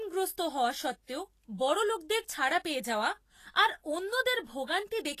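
Throughout, hissy, grainy speech with blurred attacks points to likely Vorbis compression near 34 kbps; a spectrogram shows speckled treble and nothing above 14.2 kHz.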